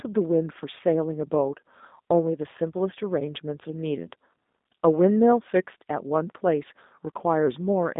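Throughout, G.729 codec damage is plainly audible. Nothing passes above 3.8 kHz, and pulse-based resynthesis, consistent with 8 kbit/s, leaves the speech rough and synthetic.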